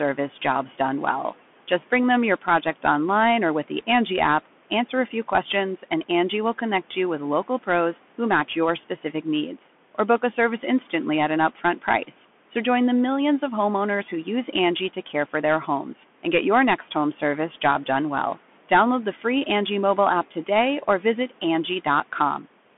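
The clip is speech, with room noise about 24 dB below the voice. Throughout, it carries Bluetooth CVSD headset codec damage, which is plainly audible. The band is held to about 200 Hz to 3.4 kHz, and nothing passes above 3.8 kHz. One-bit adaptive steps add granular hiss and scratchy s sounds, which fits a 64 kbps CVSD link.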